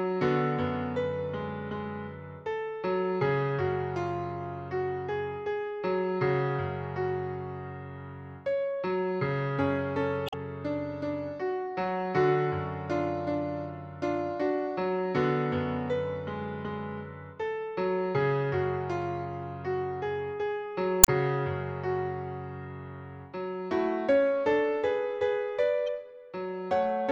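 At 10.26 to 10.34 s, 21.01 to 21.09 s, and briefly at 25.87 s, the sound briefly breaks up: damaged data in a compressed stream. Corrupted bytes make the decoder misread those frames and lose sync until it finds a valid frame header. Unlike a buffer dropout, which leaves a gap of silence or a plain click, each burst here comes from misread compressed frames, lasting under a tenth of a second.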